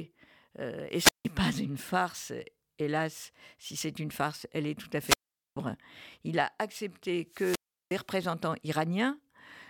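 Wireless microphone squelch dropouts occur at 0.91, 5.03 after "elle est tout à" and 7.28 s after "il a accepté": hiss rises as the FM signal fades, the receiver mutes for about 160, 430 and 360 ms, and the speech returns.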